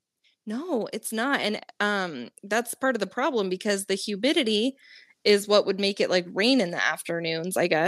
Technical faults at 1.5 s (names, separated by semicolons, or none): automatic gain rising